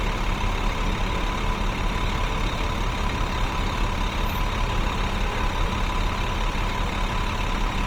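A recording of sounds that is plainly degraded from start to finish: tonal parts come across rough, grainy and noisy rather than clean, while the bandwidth stays wide, with content reaching up to about 20.2 kHz. This is likely Opus compression in its music-oriented CELT mode. At a low bitrate, which fits roughly 24 kbps, the encoder preserves each band's overall energy but fills starved bands with folded or noise-like content, producing that grainy texture.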